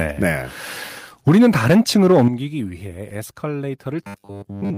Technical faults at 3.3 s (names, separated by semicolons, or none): none